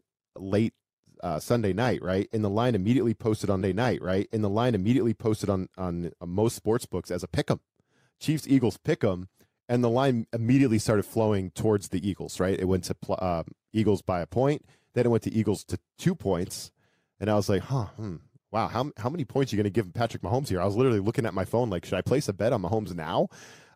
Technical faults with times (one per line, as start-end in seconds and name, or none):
3.60-5.60 stream segment repeated